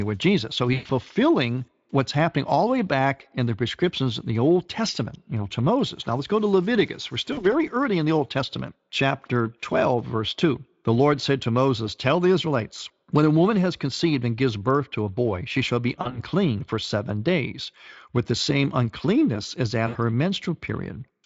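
Around 0.73 to 0.91 s, 7.33 to 7.45 s (just before "early in the"), 16.01 to 16.21 s (after "boy she shall be") and 19.87 to 19.97 s (after "the same uncleanness as"), there's VoIP packet loss concealed by the speech codec. The decoder stretches the last sound into a buzzy tone or coloured noise that fades, and it stays weak briefly afterwards.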